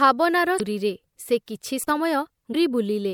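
At 0.57 to 0.61 s, damaged data in a compressed stream corrupts a short run of frames. The decoder misreads them and loses sync, searching for the next valid frame header, which produces a brief glitch in the speech. At 1.82 to 1.90 s, an intermittent contact opens the line for about 37 ms. The speech drops out with crackle at the edges and faint hiss in the gap. At 2.51 to 2.55 s, the same compressed-stream damage recurs as a second, equally short decoder blip.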